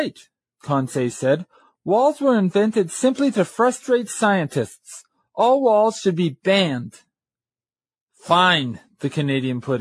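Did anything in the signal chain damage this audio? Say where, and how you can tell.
No, nothing in the signal chain stood out as damaging this audio on listening.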